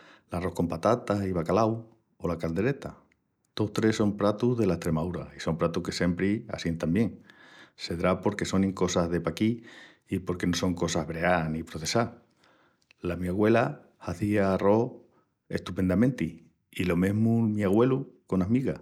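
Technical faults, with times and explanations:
No technical faults can be heard in this speech recording.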